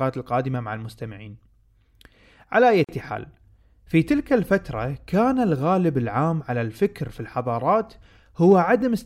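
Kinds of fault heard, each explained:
Gap at a join of encoded pieces: the speech drops into a silence of about 43 ms, from 2.84 to 2.89 s, then resumes where it left off. Separately encoded segments were joined without trimming the encoder's start delay and end-frame padding, leaving a silence whose edges the codec smears.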